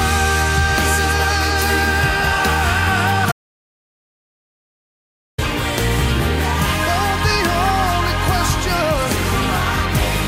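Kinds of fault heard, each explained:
Audio dropout to silence: input likely lost, leaving silence without room tone from 3.32 to 5.38 s, about 2.06 s, unlike a quiet passage or fade.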